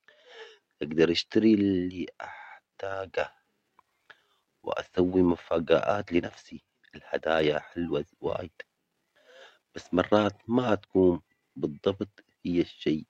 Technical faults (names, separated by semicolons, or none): none